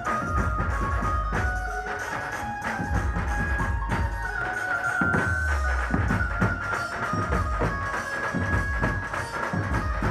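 From 4.00 s to 5.57 s there is loudspeaker feedback squeal: a single tone at 1.5 kHz that swells over roughly a second and a half until it sits at about the same level as the surrounding sound, then stops. A microphone was picking up the loudspeaker it was driving, and at 1.5 kHz the gain around that loop went above one, so the tone fed on itself and kept growing.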